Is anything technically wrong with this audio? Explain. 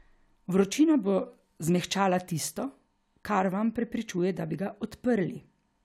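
No, nothing technically wrong is audible anywhere in this speech recording.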